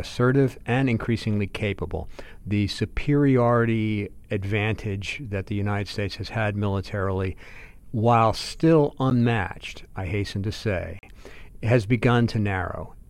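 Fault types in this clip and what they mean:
Block of digital silence: stretches of the output were written as zeros, so the speech cuts to silence and returns with no fade: a 10 ms tick at 9.1 s after "had militarily while still" and a 40 ms hole from 10.99 to 11.03 s.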